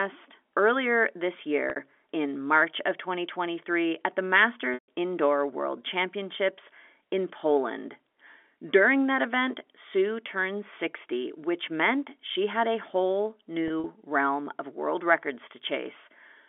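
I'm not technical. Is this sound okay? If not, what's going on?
No. The speech has three brief glitches where the sound catches and holds for a moment: at 1.70 s just after "earlier this", at 4.74 s after "at the", and at 13.68 s between "she had a whole" and "realm of world records". This is packet loss with pitch repetition. Chunks of audio went missing in transit, and the receiver filled each gap by repeating the last bit of the voice's pitch. The second gap, about 140 ms, is the longest, long enough that the repeat fades toward silence before the speech returns. The other two each lose about 60 ms. At 13.68 s that loss is split into pieces spread over about 160 ms. The narrow, phone-like tone comes from ordinary telephone coding, not from these glitches.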